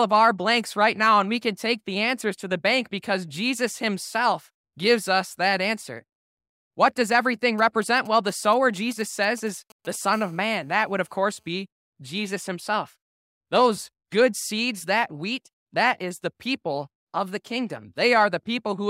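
A nearby 2G phone's signalling bursts are rectified by the audio circuit in this speech clip, giving GSM signalling bursts from 7.58 to 9.96 s, just after "does everything": a galloping dit-dit-dit of short 217 Hz buzzes roughly 25 dB below the speech. A 2G phone then transmits in bursts 217 times a second during a call, producing GSM phone buzz from 10.13 to 11.55 s, a hard, raspy 217 Hz buzz rich in harmonics, about 34 dB below the speech.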